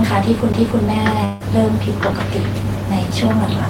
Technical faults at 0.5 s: CD skip

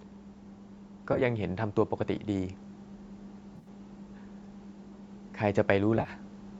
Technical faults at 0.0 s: none

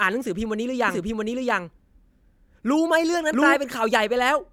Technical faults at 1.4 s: doubled audio track

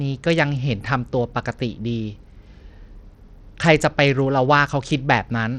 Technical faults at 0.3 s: Bluetooth SBC compression

